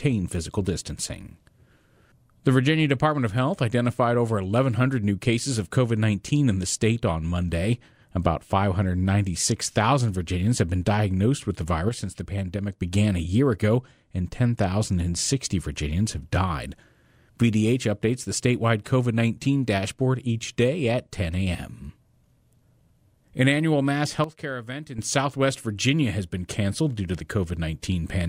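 A sudden gain jump, likely a level change applied without a ramp, cuts the speech and background noise together by about 6 dB from 11.89 to 12.82 s after "been diagnosed with the", then by about 10 dB from 24.24 to 24.99 s after "annual mass".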